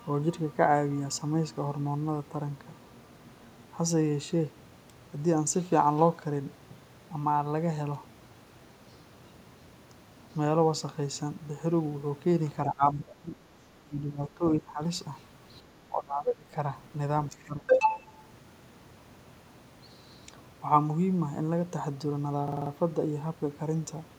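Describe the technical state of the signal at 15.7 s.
At 15.63 to 15.68 s the speech level briefly sags by about 5 dB for roughly 50 ms, a quick, shallow duck rather than a full dropout. The likely cause is speech suppressed in double talk: with both ends talking at once, the echo canceller couldn't tell the local talker from loudspeaker echo and attenuated the whole signal. On a waveform it shows as a short pinch in the envelope; on a spectrogram, a faint vertical band of reduced energy.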